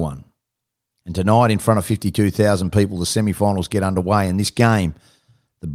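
No technical faults can be heard in this recording.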